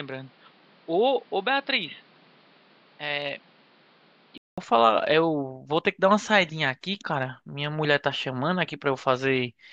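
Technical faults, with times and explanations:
0.00–4.58 s, likely an input switched to a poorer device. The speech sounds dull and boxy, with nothing above 5.4 kHz. It is a little quieter, with added background noise about 30 dB down. A 200 ms silence ends it, then fuller sound returns.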